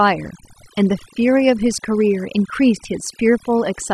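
Overdone noise removal runs the whole way through: bands near the noise floor get gated off, so the background sinks to twinkly near-silence and quiet parts of the voice go with them.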